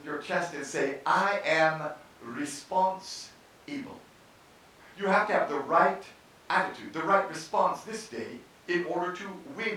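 No technical faults can be heard anywhere in the recorded speech, and the signal stays continuous and steady throughout.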